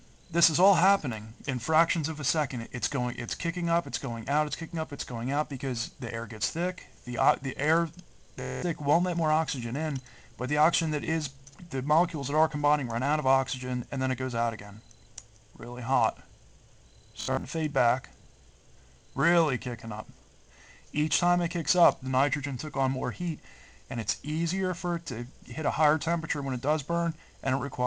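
Bluetooth stutter hits at 8.42 to 8.63 s and again at 17.21 to 17.44 s. Missing packets made the receiver loop a brief slice, producing a buzzing machine-gun effect before the sound jumps ahead. Waveforms show identical repeating cycles, and spectrograms show evenly spaced vertical striping.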